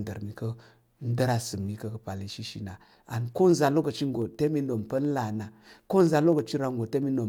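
Speech carrying periodic USB or driver dropouts from 0.07 to 7.22 s: tiny slivers of audio, well under a millisecond, are skipped every 64 ms, giving around a hundred ticks. Their strict clock-like spacing, sounding only under signal, separates them from random crackle.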